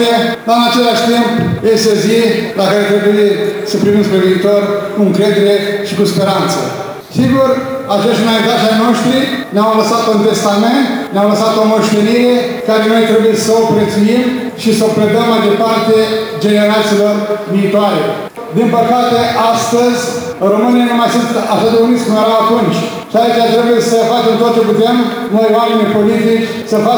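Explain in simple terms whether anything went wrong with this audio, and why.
The converter's clock wobbled throughout, from the first second to the last, so each sample was taken a few millionths of a second too early or too late. That sample clock jitter adds a hiss or roughness that grows on loud, bright moments and disappears in quiet gaps.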